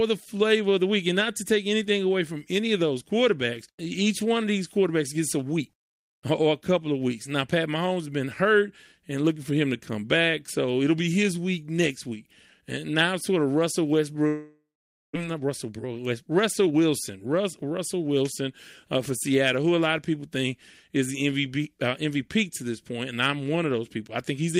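Speech clip. From 14.27 to 15.17 s the sound smears into a fading buzz, then goes silent for about half a second, likely a long network dropout. Unlike a short concealed packet loss, 0.6 s of speech never returns. From 15.27 to 17.71 s a jitter buffer speed-up plays speech at 110% while the pitch stays the same, which rules out a resampling error, trimming roughly 0.3 s.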